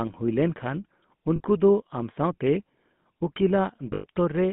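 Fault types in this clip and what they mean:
GSM full-rate codec: The speech was carried through the original GSM codec, which models the vocal tract and excites it with a coarse, regularly spaced pulse train, with a sound that fits the 13 kbps full-rate mode. The line passes only about 150 Hz to 3.5 kHz, so the voice is thin and narrow, and the crude excitation gives it a plainly audible buzzy, gravelly roughness.
lost GSM frames: At two points the decoder received no usable frames and filled the gap by repeating the last good frame's settings. At 1.36 s a 40 ms dropout, which fits two frames, becomes a short rough, metallic ring. At 3.94 s a longer 100 ms loss, which fits five frames, holds that ring longer.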